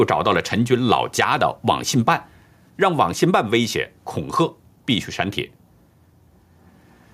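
Gain pumping runs through the whole speech clip. The gain swings by around 5 dB, pulled down each time the talker gets loud. The likely cause is input gain set far too high with a fast limiter or compressor clamping every peak. On a waveform the loud and soft parts sit closer in level than natural speech. A spectrogram shows the level dimming under each loud syllable.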